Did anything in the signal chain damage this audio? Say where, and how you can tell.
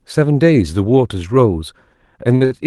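Yes. There are two short stalls from late packets, from 2.35 to 2.43 s and from 2.45 to 2.53 s, near the end of the speech. Each time a network packet arrived late, the jitter buffer ran dry, and the receiver stretched the last sound for about 54 ms and then about 61 ms. Playback then resumed where it left off. Nothing is lost, but the sound is briefly held too long with a slight buzz or dip, and the delay grows by the same amounts.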